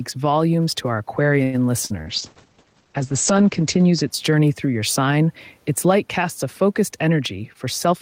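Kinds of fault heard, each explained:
Gain pumping: loud and soft parts are squashed closer in level, a swing of around 5 dB, likely from a fast limiter behind excessive mic gain.
Short stall from a late packet: after "volumes to our", a sound is held about 99 ms around 1.43 s, then speech resumes with nothing lost, unlike a loss burst.
Burst of packet loss: near 1.85 s a 49 ms fill fades out and 40 ms of speech is skipped, so the audio jumps ahead rather than pausing.
Short concealed packet loss: around 2.02 s a brief 40 ms smear patches a hole, and 40 ms of speech is gone, as in the burst.
Call bitrate drop: from about 2.04 to 4.16 s, ending before "journey through your sign", coding falls from 40 to 11 kbps and bandwidth from 20 to 8 kHz, sounding muffled and watery.
Jitter buffer speed-up: after "light casts a focused", from 7.0 to 7.93 s speech runs 8% faster at unchanged pitch, around 70 ms trimmed, hurried rather than dropped.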